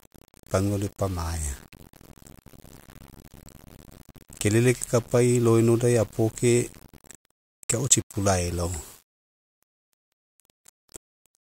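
From start to finish, the speech carries a grainy, rough distortion that shifts with the sound. Quiet passages turn gritty. The softest moments sputter or drop to silence. The error sits only about 25 dB below the speech. The likely cause is low bit depth without dither: the samples were rounded to a coarse grid, which fits about 7 bits. With no dither, the rounding error tracks the signal instead of becoming steady hiss.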